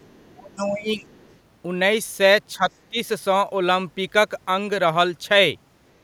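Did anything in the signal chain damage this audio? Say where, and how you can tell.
Yes. The other side's voice is leaking through at 0.00 to 0.28 s, 0.58 to 0.67 s and 1.14 to 1.38 s, as a faint second voice mostly about 35 dB under the talker, rising to roughly 25 dB under in the middle burst. The stage is call processing. The likely cause is the echo canceller leaving residual loudspeaker echo in the microphone signal, so scraps of the far end ride along with the outgoing speech.

Speech is suppressed in double talk from 0.28 to 1.12 s, where the talker's level sinks by up to around 30 dB for most of that stretch, and again in brief dips at 2.57 to 2.63 s (about 10 dB) and 2.90 to 2.97 s (about 15 dB). This also happens in call processing. It is likely the echo canceller's suppressor mistaking overlapping near-end speech for echo and turning everything down while both sides talk.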